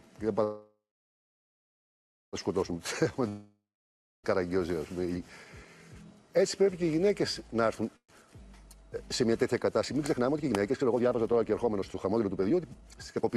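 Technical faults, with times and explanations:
0.43–2.36 s, call audio freeze: the last sound carries on as a fading buzz, then about 1.5 s of near-silence. Packets were likely held up and the jitter buffer ran dry. The sound resumes where it stopped, nothing lost, but now running about 1.9 s late.
3.28–4.26 s, long network dropout: the sound smears into a decaying hiss, then goes quiet for about 0.6 s. When it returns, roughly 0.96 s of material has simply gone, likely because that stretch never arrived and was never played.
7.96–8.12 s, call audio freeze: a short 0.12 s stall with about 70 ms of quiet, likely another brief starved buffer. Afterwards the sound picks up exactly where it left off, so nothing is missing, just a further 0.12 s of added delay.
10.10 s to the end, jitter buffer speed-up: the sound runs at about 131% speed with pitch unchanged, so it feels rushed. The buffer was draining its backlog by snipping out short pitch-period slices over and over, about a second's worth in total.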